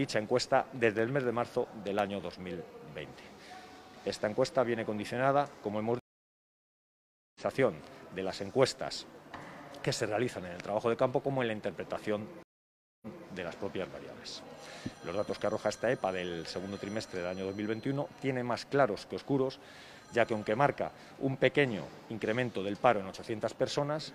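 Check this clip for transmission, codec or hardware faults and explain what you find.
Two faults are present: periodic driver dropouts early on, and two stream reconnects.

From 0.99 to 2.99 s, periodic USB or driver dropouts skip a tiny slice of audio, a fraction of a millisecond, every 0.25 s. A blocked bus or driver causes the skips, which are heard as regular ticks.

At 5.99 s a stream reconnect leaves 1.36 s of silence. The fresh decoder resumes at 7.40 s, roughly a second later in the stream. At 12.43 s a 0.59 s gap ends at 13.28 s, with a resent burst repeating 256 ms of earlier audio.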